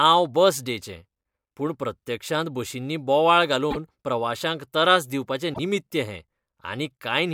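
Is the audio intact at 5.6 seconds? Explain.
No. Just after "प्रवाश्यांक तरास", from 5.53 to 5.59 s, the speech skips forward and the next stretch comes out as a chirp, a burst of noise or a short hole. The likely cause is a broken MP3 bit reservoir: frames were cut out, and the frames that followed reached back for borrowed data and decoded bytes from the wrong frame. The span is about 66 ms, roughly two to three 26.1 ms frames. Unlike a plain dropout, the audio jumps ahead instead of leaving only a clean gap.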